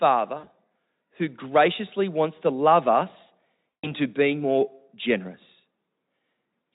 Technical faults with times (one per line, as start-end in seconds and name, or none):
0.37-0.49 VoIP packet loss concealed by the speech codec
3.82-3.92 VoIP packet loss concealed by the speech codec